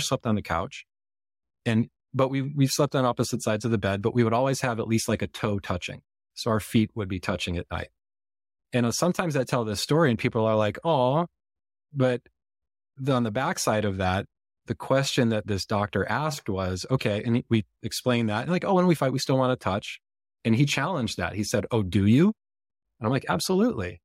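No technical faults are audible.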